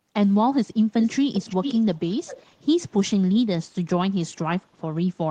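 A far-end echo canceller likely let its loudspeaker pickup through, so this speech carries an echo leak from 1.0 to 1.16 s and again from 1.33 to 2.61 s: a faint copy, about 15 dB down, trailing the voice by roughly 0.4 s.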